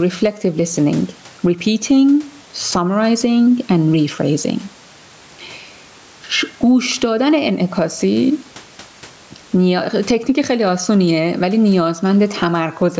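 Throughout, the input gain is likely set far too high, causing gain pumping: a fast limiter ducks each loud syllable, and the gain swings about 15 dB.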